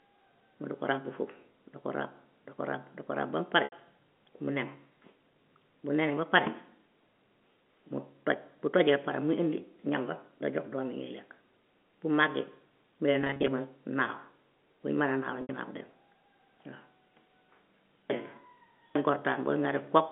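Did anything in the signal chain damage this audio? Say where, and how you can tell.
Yes, at the network stage: packet loss with pitch repetition, heard over the G.711 telephone band of 200 Hz to 3.4 kHz. At 3.64 to 3.72 s, just after "mu pare", about 80 ms is bridged. From 13.22 to 13.48 s, after "bu màggee mu lay", 160 ms of loss is scattered in runs of up to 30 ms. At 15.42 to 15.49 s about 70 ms is bridged. Each gap sounds like a briefly held, buzzy tone because the receiver loops the last pitch period. A plain dropout would instead be silent or click.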